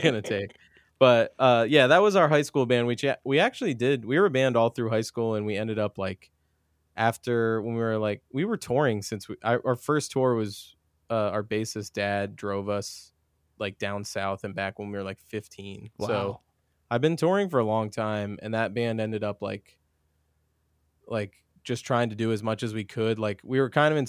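Nothing stood out as technically wrong on listening to this speech recording.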